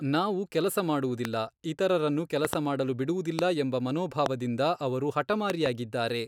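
Loud pops mark this speech clip at 1.25–1.27 s, just after "ನಾವು ಕೆಲಸ", and at 3.39–3.41 s and 4.26–4.28 s, with double pops at 2.45–2.55 s and 5.50–5.68 s. Each peaks roughly 15 to 20 dB above the speech, which continues underneath. The likely cause is sudden voltage steps, such as static or a switch glitch, entering the signal chain.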